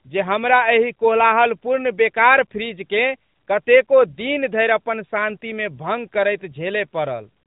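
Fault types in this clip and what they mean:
No faults are present.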